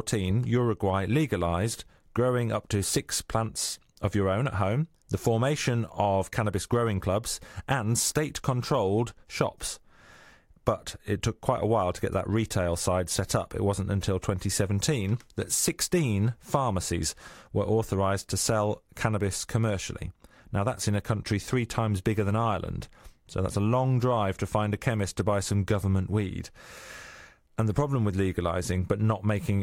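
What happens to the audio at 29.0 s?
Nothing goes wrong at 29.0 s; the speech carries on intact through that moment with no dropout, click or distortion.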